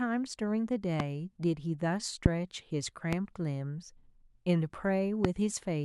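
A sudden voltage pulse, likely from a plug, switch or static discharge, enters the signal path four times: 1.00–1.02, 2.26–2.28, 3.13–3.15 and 5.25–5.27 s. Each loud pop is a single sharp hit, roughly 20 dB above the speech, the second somewhat stronger, while the speech runs on underneath.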